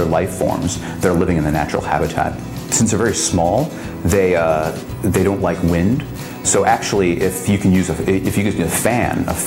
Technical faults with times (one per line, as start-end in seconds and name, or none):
none